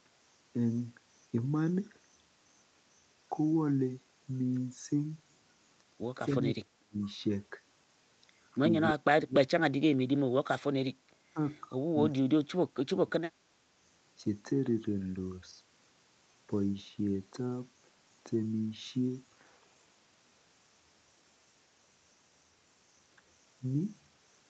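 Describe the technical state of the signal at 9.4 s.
At 9.4 s the echo canceller likely mistook both sides talking at once for loudspeaker echo and turned the near-end talker down: speech suppressed in double talk. From 9.02 to 9.7 s the speech drops by up to about 40 dB, nearly vanishing.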